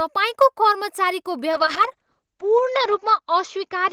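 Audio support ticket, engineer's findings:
Call bitrate drop from 1.53 s to the end. Speech goes muffled and watery, with the top end gone. Encoder side: bandwidth estimate fell, Opus pushed from 32 to 8 kbps and cut audio bandwidth from 20 kHz to 8 kHz. Bottoms out for about 1.4 s.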